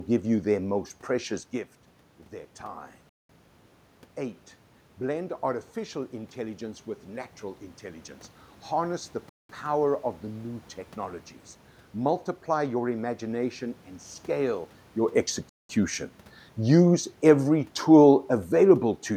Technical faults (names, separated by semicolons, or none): gap between chunks